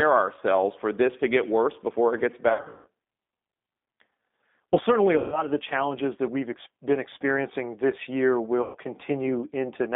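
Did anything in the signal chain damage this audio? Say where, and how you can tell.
Yes. Throughout, the speech sounds narrow and slightly rough and synthetic, confined to roughly 200 Hz to 3.6 kHz with nothing above, and the damage is plainly audible. This is the codec stage: G.729 at 8 kbit/s, which rebuilds each 10 ms frame from a vocal tract filter, a pitch predictor and a handful of pulses. It discards the upper band and the fine detail that keep speech natural.

At the network stage, the speech turns stretched and smeared and fades three times. From 2.49 to 2.88 s, about 280 ms is lost in patches spread over 360 ms, with the longest gap 140 ms. About 140 ms is lost between 5.18 and 5.43 s, and about 120 ms between 8.62 and 8.76 s. Packets were lost, and the G.729 decoder concealed each gap by repeating its last pitch and filter at falling gain. The speech stays weak or distorted briefly after each gap until the decoder recovers.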